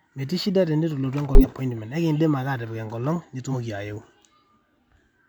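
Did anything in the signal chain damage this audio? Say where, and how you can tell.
Yes: at the codec stage, compressed frames were skipped at 1.35 s and 3.49 s, so the speech jumps ahead by about 150 ms and then about a tenth of a second.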